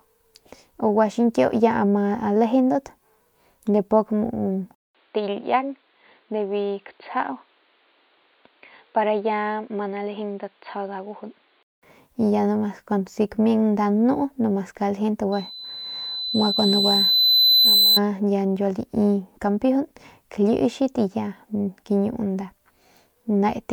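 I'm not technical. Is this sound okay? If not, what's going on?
No. Between 4.75 and 11.83 seconds the speech turns muffled and boxy, as if heard through a cheap phone. It drops a little in volume, picks up a faint new hiss, and loses all its crisp upper detail above about 4.6 kHz. A brief gap of about 0.2 seconds marks the change. The likely cause is an input switched to a poorer device: the recording jumped from one microphone to a lower-quality one, such as a headset in call mode.

From 15.32 to 18.00 seconds a loudspeaker feedback squeal appears: a single piercing whistle at 4 kHz that swells steadily over about three seconds until it is louder than the speech. This happens when a microphone picks up a nearby speaker playing its own sound. That whistle goes round and round the loop, growing each time, until something stops it.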